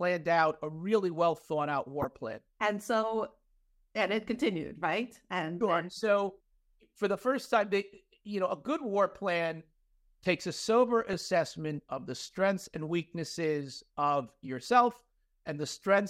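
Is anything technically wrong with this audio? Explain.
Yes. Corrupt frames were decoded at 2.02–2.05, 5.95–5.99 and 11.13–11.22 s. Flipped bits misplaced spectral energy, producing brief chirps or noise bursts across a few frames, the faintest at 5.95 s.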